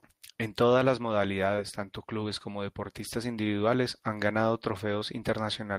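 Right at 4.99 s there's a short concealed packet loss: about 20 ms never arrived, so the decoder patched it by extending the last sound, leaving a brief smear.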